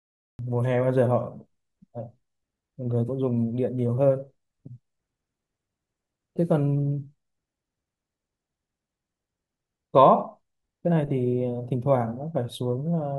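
Cut-off start at 0.39 s: capture began late, so the speech jumps abruptly out of digital silence mid-sound, with no natural attack or fade-in.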